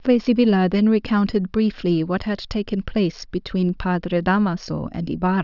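No technical faults can be heard anywhere in this speech recording.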